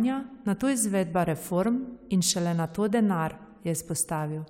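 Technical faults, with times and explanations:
Nothing technical stands out here: the speech comes through without any dropouts, glitches or other faults to report.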